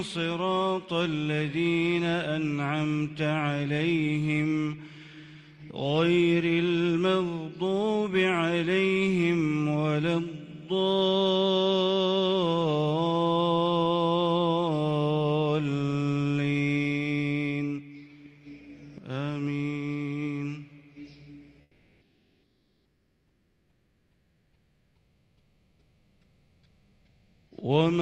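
From 21.61 to 27.51 s the background becomes a steady, featureless hiss about 6 dB quieter, lasting 5.9 s. This is comfort noise in place of the background, likely from Opus DTX pausing transmission while the receiving end generates matching filler noise.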